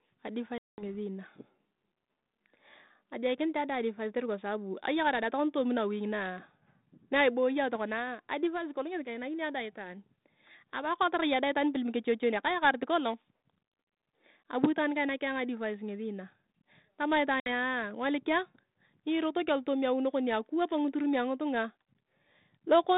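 At 0.58 s the speech drops into a hard-edged hole of about 200 ms. That's packet loss on an ADPCM call, roughly ten packets gone. When the sound comes back around 0.83 s, the decoder's predictor and step size have drifted from the sender's, so it comes back slightly distorted before it settles. The same thing happens at 17.4 s, with a shorter gap of about 60 ms, maybe three packets, just before "ngolikia nyirotok alotooma". Under all of it the line sits in a narrow telephone band, roughly 150 Hz to 3.7 kHz, which fits 32 kbit/s G.726 ADPCM.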